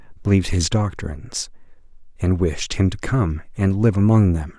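No technical faults are audible in the recording.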